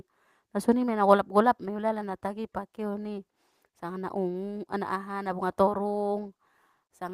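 No audible technical faults.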